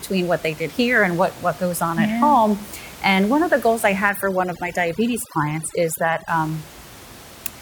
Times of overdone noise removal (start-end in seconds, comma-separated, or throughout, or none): 4.09-6.28